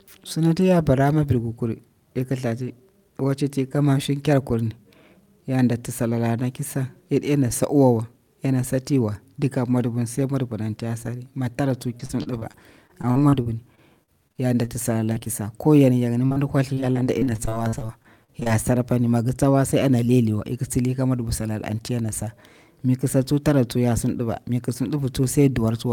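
Packets in this speech recording were repeatedly lost or delayed from 11.97 to 14.69 s, and again from 16.74 to 18.49 s. This is repeated packet loss (robotic sound). Each run holds about sixteen gaps of up to about 40 ms, and the decoder bridged every gap by extending the preceding sound. Roughly a sixth to a fifth of each stretch is synthesized filler, so the speech turns choppy, with fragments missing.

Between those runs, short concealed packet loss hits at 15.13, 15.19 and 15.25 s, and again at 16.32 to 16.38 s. Each hole is only a few hundredths of a second, patched from the last pitch or as shaped noise. The repairs are heard as quick smears or wobbles that can swallow a consonant.

A burst of packet loss at 16.26 to 16.32 s drops several tens of milliseconds in a row. The concealment there holds the last sound and fades it, leaving a brief buzz or hiss before the audio jumps ahead.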